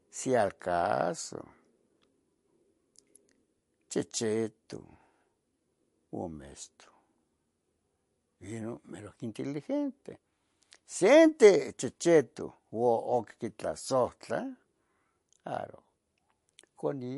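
From start to finish the speech has nothing above 11.3 kHz, and its s sounds chirp with a watery swirl, likely from MP3 compression at a starved bitrate near 48 kbps. Unlike a clean low-pass cut, weak frequency lines flicker between frames and consonant attacks smear.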